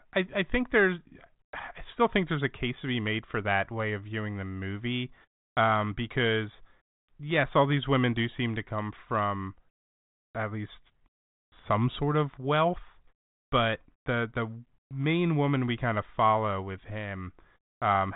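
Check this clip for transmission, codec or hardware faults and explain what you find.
No transmission, codec or hardware faults.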